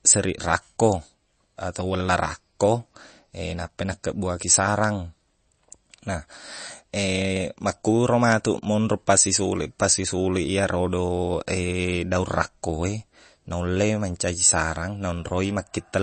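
A speech clip whose damage, present throughout, points most likely to MP3 compression at a low bitrate, consistent with around 32 kbps: the encoder ran short of bits, dropped weak frequency lines frame by frame and removed everything above 8.3 kHz, leaving plainly audible watery, swirly artefacts, smeared attacks and dull treble.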